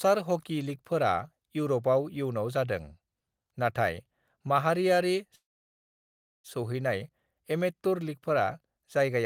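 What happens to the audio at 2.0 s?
Nothing goes wrong at 2.0 s: the speech carries on intact, with no dropout, click, distortion or other fault at that moment.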